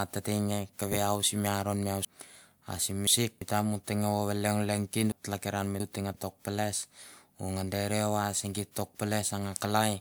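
At 2.05 to 3.41 s the speech gets jumbled: chunks out of order, with one 0.34 s piece arriving three chunks late. It happens again at 5.12 to 6.14 s, two chunks late. Nothing's missing, but the order is scrambled, with hard joins between the pieces.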